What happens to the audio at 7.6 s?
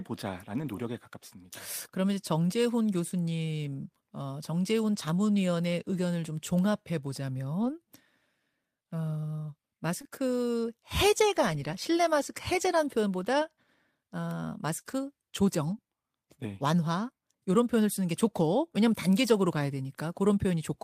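From 7.61 to 7.71 s, a lost packet is rebuilt from error correction: the decoder plays low-bitrate copies from the following packets, so there is no gap, but the speech turns briefly rougher and noisier.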